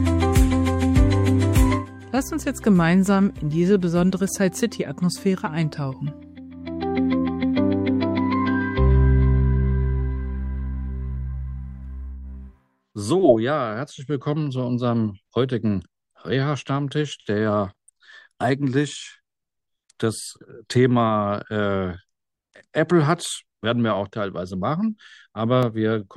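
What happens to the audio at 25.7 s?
Right around there, between 25.63 and 25.66 s, a single loud pop lands on top of the audio, peaking roughly 10 dB above the surrounding level. It's a sharp, brief thump, and the sound underneath just keeps going through it. The likely cause is a sudden voltage step or spike getting into the signal, something like a plug, a switch, static or a driver hiccup, with the downstream circuitry shaping it into that short burst.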